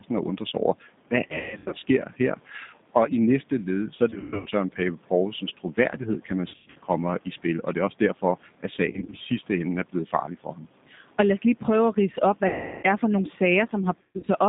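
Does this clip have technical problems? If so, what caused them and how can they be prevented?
Yes. Throughout, the speech sounds thin and slightly rough, with a synthetic edge and nothing below about 150 Hz or above about 3.7 kHz. That is the G.729 codec at 8 kbit/s, which models each 10 ms frame with a vocal tract filter, a pitch predictor and a few pulses, so fine detail is lost and the band is limited to the phone line. Using a wideband codec such as G.722 or Opus avoids this.

Six times the speech smears into a buzzy tone or coloured noise that fades, and stays weak just afterward: 1.28 to 1.75 s, 4.10 to 4.50 s, 6.48 to 6.79 s, 8.92 to 9.16 s, 12.47 to 12.85 s, and 14.01 to 14.30 s. This is VoIP packet loss concealed by the speech codec. The decoder repeats its last pitch and filter while lowering the gain, and recovers slowly because each frame builds on the one before. The gaps are mostly scattered, with runs up to 140 ms, but at 12.47 s a solid 360 ms is missing. 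A more stable network path, or forward error correction with a larger jitter buffer, would prevent it.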